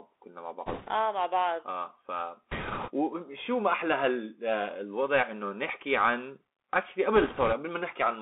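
From start to finish the speech sounds boxed-in and thin, with a granular hiss beneath it, scratchy s sounds, and roughness on louder bright passages. This is the Bluetooth CVSD headset codec. The line passes only about 250 Hz to 3.5 kHz. The codec sends one bit per sample, saying only whether the signal goes up or down, and adapts its step size. That fits a 64 kbps headset link. Fast, loud high content outruns the step and distorts.

Three patches of rushing, crackly noise come through without any sharp clicks: from 0.66 to 0.90 s, from 2.52 to 2.90 s, and from 7.16 to 7.54 s. These are bit errors on a Bluetooth voice link. Flipped bits each nudge the one-bit waveform only slightly, and the damage fades quickly, so it spreads as a wash of grit rather than pops. The error rate is a few percent in each burst. The second burst is the harshest and the last is the mildest.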